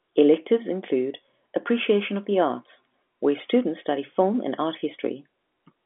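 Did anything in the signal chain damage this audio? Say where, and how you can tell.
No, nothing in the chain has damaged this speech: the narrow sound is just an ordinary G.711 A-law telephone path at 64 kbps, passing roughly 200 Hz to 3.4 kHz with nothing above 3.6 kHz, which is that format's normal bandwidth.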